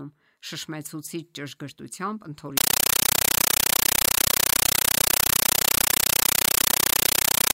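Speech that, from 2.57 s to the end, turns into a compressed stream played as audio: undecoded AC-3-like data heard as loud static, 9.3 ms bursts repeating 31.25 times a second.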